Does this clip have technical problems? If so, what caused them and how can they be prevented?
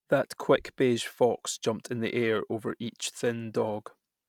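Yes. From 1.95 s, just after "quick beige fox jumped," to the end of the clip, the speech takes on a rough, metallic edge that is most noticeable on sibilants and bright sounds and disappears in the pauses. This is periodic clock jitter: interference at around 700 Hz wobbles the converter's sampling clock, adding sidebands spaced about 700 Hz either side of every speech component. Prevent it with a clean, well-isolated clock supply and proper grounding.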